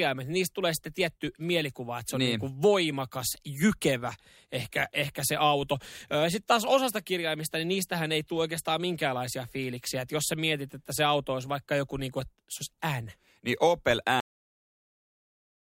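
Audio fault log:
14.20–15.62 s cut-off end: the speech halts abruptly mid-sound and falls straight into digital silence with no decay, because the final buffers were never written out.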